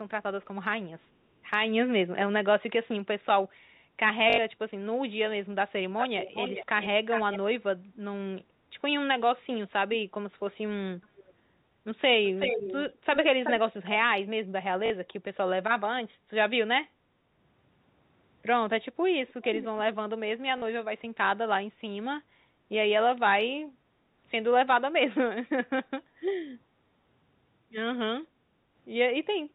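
A telephone-band speech recording, limited to 4 kHz by its G.711 A-law coding, carrying three distinct faults. Packet loss with the last packet repeated occurs at 2.16–2.18 s, 4.3–4.38 s, 14.86–14.9 s and 20.58–20.62 s, lasting 20, 80, 40 and 40 ms. These spans fit 20 ms packets. The same fragment loops at once, and the 80 ms run buzzes at 50 Hz. An echo leak appears at 5.98–6.9 s, 7.1–7.39 s, 12.25–12.93 s, 13.13–13.2 s, 13.44–13.53 s and 19.28–19.66 s. Unlike the instant stutter, this is a fainter copy of the speech trailing it by 376–408 ms, roughly 5 to 10 dB down. It is likely a far-end loudspeaker whose echo canceller let some of its own playback back into the call. Background gated by the echo canceller appears at 28.46–28.74 s. The room sound dips by about 8 dB for around 0.3 s and then returns. Nothing is repeated, which separates it from packet loss.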